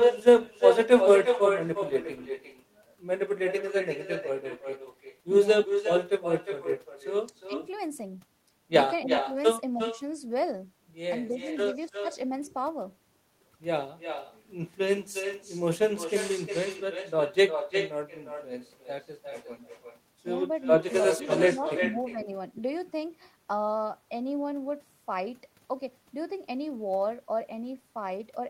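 From the start of the clip to its end, every phrase returns as a distinct copy roughly 0.4 s later, only about 6 dB quieter: echo with no canceller. The far end's loudspeaker feeds its microphone, and nothing subtracts that path, so the speech comes back after the network round trip, thinner. Unlike room reverberation, which smears continuously into a decaying tail, this is a discrete, delayed repeat.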